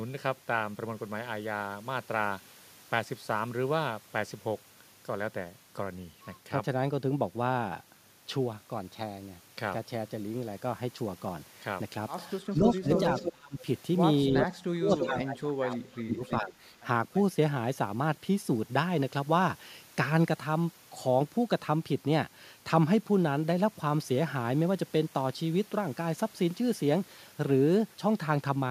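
A far-end echo canceller likely failed to cancel its loudspeaker pickup, so an echo leak appears from 12.46 to 13.32 s: a copy of the speech returning 322 ms late at about 5 dB below it. Overlapping this, from 12.51 to 13.66 s, speech is suppressed in double talk, likely because the canceller mistook the talker for echo. The voice dips by around 30 dB in pieces totalling about half a second. The pattern recurs from 14.31 to 16.57 s, with drops near 25 dB over roughly one and a half seconds, while a 326 ms echo leak, about 5 dB down, runs from 14.43 to 16.36 s. A faint last echo leak, 328 ms late and about 30 dB down, flickers from 17.14 to 17.20 s.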